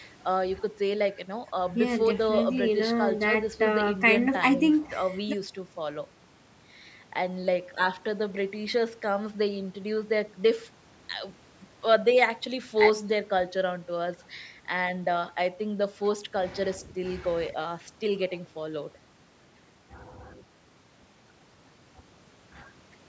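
There are no technical faults to describe in this speech clip, which has been through a call's normal microphone processing.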